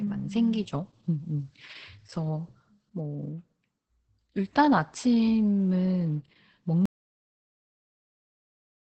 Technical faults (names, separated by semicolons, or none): Opus voice compression; audio dropout to silence